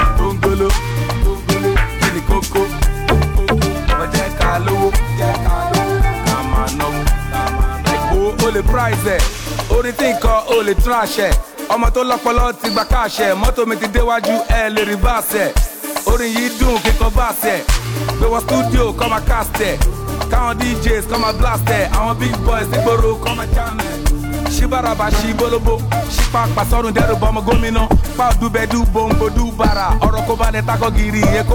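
Nothing in the audio stood out as a technical problem on listening.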